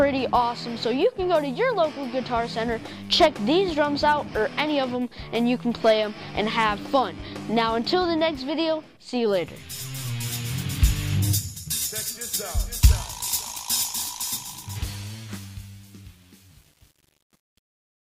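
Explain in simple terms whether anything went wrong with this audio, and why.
Truncation distortion on a fade, from 14.18 to 18.17 s: as the fade-out gets quiet, too few bits remain, so the sound turns gritty, worst after 14.62 s.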